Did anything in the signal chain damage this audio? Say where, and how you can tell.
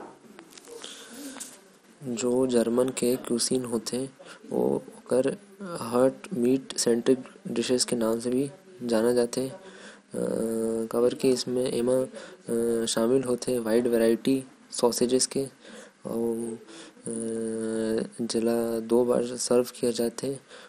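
Yes, at the codec stage: the speech sounds dull and granular throughout, with nothing above 15.8 kHz, likely MP2 compression whose starved sub-bands fit about 64 kbps.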